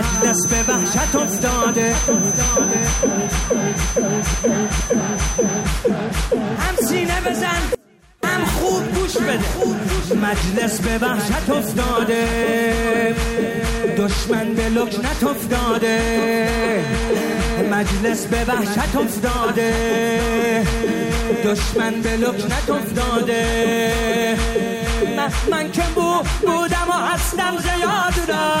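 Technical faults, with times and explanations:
0.0–5.72 s: feedback whistle. The loudspeaker-to-microphone loop was likely sitting just at the edge of instability, so a single 6.1 kHz tone rings on without building. It is heard as a thin, steady whistle, only about 5 dB below the sound, swelling and fading slowly in level.
7.75–8.23 s: audio dropout to a faint residue. The wanted signal was likely lost for about 0.49 s while the downstream path stayed live. The sound cuts out abruptly, leaving only a faint leak roughly 30 dB down, then returns just as suddenly.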